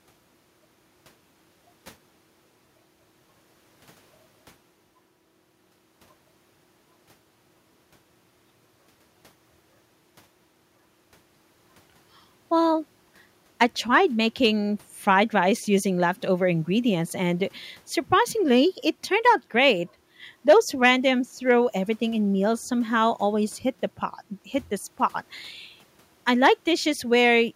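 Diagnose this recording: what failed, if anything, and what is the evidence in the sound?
No audible fault detected.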